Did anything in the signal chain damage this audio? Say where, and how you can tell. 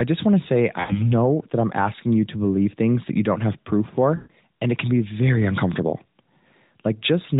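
Yes: lost AMR speech frames on the radio link at 0.80–1.05 s and 4.16–4.31 s. The sound stretches and fades, showing decoder concealment rather than an abrupt dropout.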